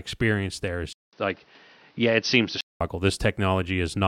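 The input likely switched to a poorer device from 0.93 to 2.81 s: a 200 ms gap, then dull speech cut off above 6.1 kHz, with faint new noise.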